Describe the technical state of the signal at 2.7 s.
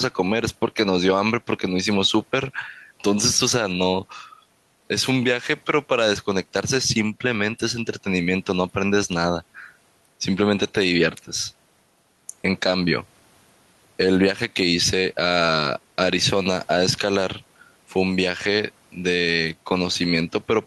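At 2.7 s the speech shows gain pumping, as it does throughout: the room noise, about 41 dB down, swells in pauses and ducks under loud syllables by around 5 dB, likely from excessive gain driving a fast limiter.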